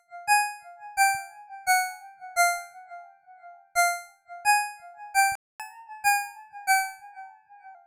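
At 5.35 s the sound cuts to silence for about 0.24 s, a playback stall, likely the player starving for data or its output thread being blocked. From 5.60 s to 7.75 s a catch-up at higher speed follows: the backlog is resampled at 1.1x, so tempo rises and pitch sits roughly one and a half semitones sharp before returning to normal.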